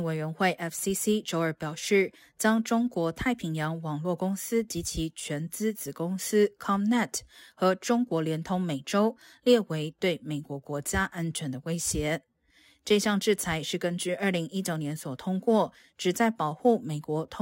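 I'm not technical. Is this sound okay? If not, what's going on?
No. Sample clock jitter runs through the whole recording, from start to finish. The device that turned this speech into digital audio kept uneven time, taking each measurement a few millionths of a second too early or too late, at random. Where the sound changes fastest, in loud and bright moments such as sharp consonants, those timing slips become errors you hear as a hiss or graininess. In the pauses it disappears.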